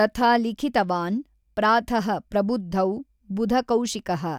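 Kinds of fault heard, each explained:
No audible faults turn up anywhere in this speech recording.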